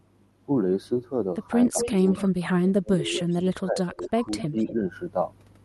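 From 1.66 to 1.78 s the speech ducks by about 10 dB. From 2.26 to 3.26 s it sinks far deeper, about 35 dB at worst, and then dips again at 3.63–4.24 s and briefly at 4.48–4.56 s. This is likely speech suppressed in double talk: with both sides talking, the canceller turns the near talker down along with the echo.

Between 1.8 and 2.23 s a second copy of the speech trails it by about 0.25 s, only about 5 dB quieter. Fainter scraps follow at 3.27–3.38, 3.85–4.08 and 4.38–4.73 s, at the same delay. This is most plausibly echo leak, with loudspeaker sound getting past the canceller and returning. The fixed lag sets it apart from room reverberation, which smears continuously instead of repeating as a distinct copy.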